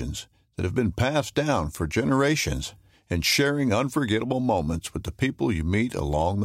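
No technical faults are audible.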